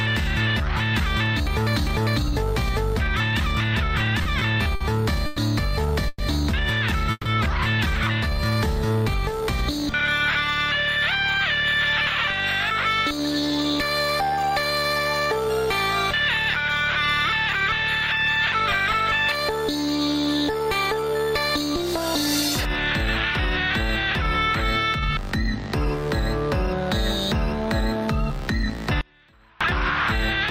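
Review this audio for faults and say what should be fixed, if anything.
Repeated stalls (stutter) run from 4.23 to 7.27 s: seven gaps where packets showed up late and the jitter buffer ran dry. The receiver stretched the last sound to cover them, 460 ms in all, the longest 140 ms. Nothing's actually lost, but about 15% of that stretch is filler, so it drags and stutters.

There are two jitter buffer slow-downs, at 8.38 to 9.42 s and 20.52 to 21.13 s. The buffer was topping itself up by repeating single pitch periods. That adds 57 ms and 68 ms and runs the audio at 95% and 91% speed with the pitch unchanged, so things sound drawn out.

The jitter buffer speed-ups go the other way, trimming short pitch-period slices to shed excess delay. From 12.72 to 17.82 s it plays at 103% and drops around a fifth of a second. From 24.50 to 28.76 s it's a gentler 101%, losing well under a tenth of a second.

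An audio dropout to a faint residue hits at 29.01 s and lasts about 0.59 s, until 29.61 s. The sound cuts abruptly to a faint trace about 30 dB down, then comes back. The likely cause is the wanted signal being lost while the path after the break stayed live.

To prevent all this, steady the network path to cut packet jitter, give the jitter buffer a bit more headroom so it adapts less aggressively, and check the connection feeding the signal in before the point where it broke.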